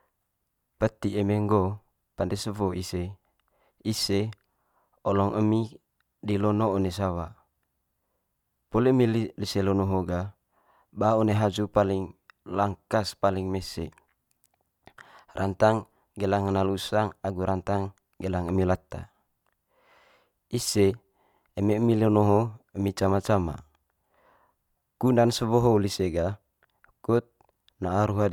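No technical faults are audible anywhere in the speech recording.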